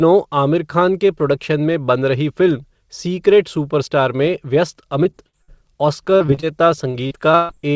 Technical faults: repeated packet loss (robotic sound); jitter buffer slow-down

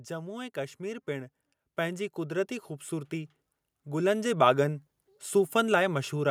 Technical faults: automatic gain rising

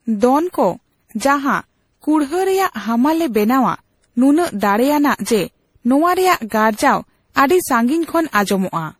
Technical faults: generation loss

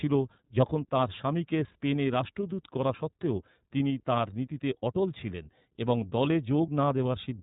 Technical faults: iLBC codec

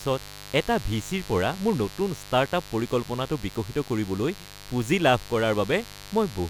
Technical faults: mains buzz

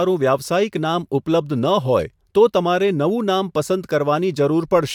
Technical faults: none

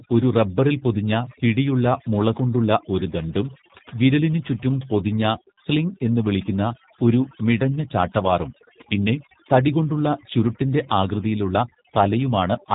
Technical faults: overdone noise removal; G.729 codec

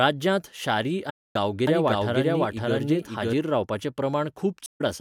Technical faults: AAC frame loss with muting; doubled audio track

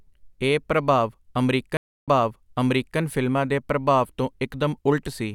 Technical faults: stream reconnect

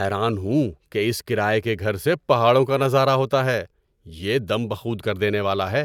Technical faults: none

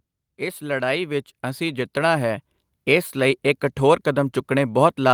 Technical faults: automatic gain rising

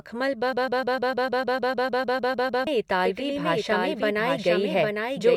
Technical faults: broken-record loop; doubled audio track

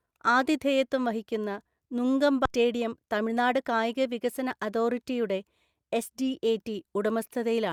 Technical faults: skip ahead; jitter buffer speed-up

